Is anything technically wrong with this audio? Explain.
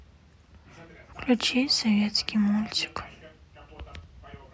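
No, no technical faults heard.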